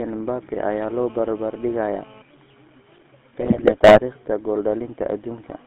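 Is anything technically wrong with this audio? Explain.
Yes. The speech has two faults: codec damage throughout, and a burst of decoding errors near the end.

Across the whole clip the GSM full-rate codec is plainly audible. It rebuilds the voice from a vocal-tract model fed by sparse, regularly spaced pulses, leaving a buzzy, gravelly roughness, which fits a 13 kbps channel. The spectrogram shows nothing below 200 Hz or above 3.5 kHz.

From 3.40 to 4.00 s, GSM bit errors strike. Corrupted filter, pitch and gain values make the decoder misbuild frame after frame, so the speech breaks into squawks, pops and gargling. The waveform shows jagged level spikes, and the spectrogram shows smeared, blotchy frames.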